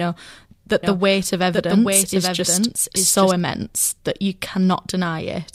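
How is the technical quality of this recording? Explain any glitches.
The recording has one clear fault, a doubled audio track. From 0.83 s to 3.31 s a second copy of the speech runs roughly 0.7 s behind the original, about 5 dB quieter, full-band and dry, switching in and out abruptly. A slower second capture path likely produced it.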